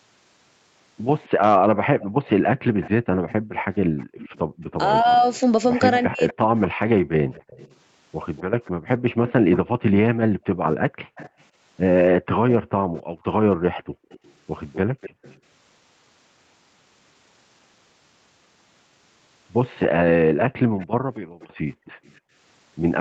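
From 1.24 s to 15.38 s a faint delayed copy of the far side's speech trails along, about 257 ms behind and about 20 dB below the main speech. This is an echo leak: the echo canceller on a loudspeaker end likely did not fully remove what its microphone picked up from the speaker, so the residue was sent back. It sits inside a band that stops at 8 kHz, as the call's microphone processing and Opus path shape it.

Overlapping that, from 1.68 s to 15.22 s, the background is gated by the echo canceller. While the loudspeaker is active, the canceller pulls the microphone down hard, by as much as about 40 dB, so the room sound drops out in patches and returns when the canceller releases. The dropouts add up to around five seconds in this stretch.

Between 5.02 s and 6.53 s the speech is suppressed in double talk. With both sides speaking at once, the canceller cannot separate the local talker from the echo and attenuates both, so the speech dips or breaks up for a total of under a second, with drops of around 40 dB. 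Cancellation failing under overlap is the likely cause.

From 19.79 s to the end the echo leak returns at a delay of 251 ms and about 20 dB down. From 19.88 s the background is gated again, dropping by up to about 40 dB.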